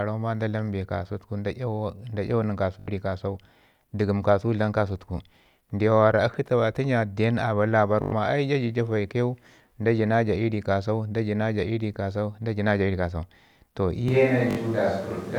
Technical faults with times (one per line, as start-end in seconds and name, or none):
2.80-2.88 Bluetooth stutter
8.02-8.12 Bluetooth stutter
14.08-15.38 switch to a distant microphone
14.51-14.57 Bluetooth stutter